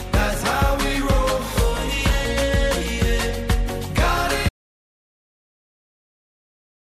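An audio dropout to silence begins at 4.49 s and runs to the end. The input was likely lost while recording continued, leaving silence without room tone.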